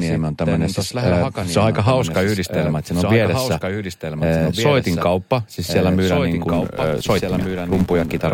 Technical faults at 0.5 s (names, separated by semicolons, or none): doubled audio track; adaptive stream starting at a low bitrate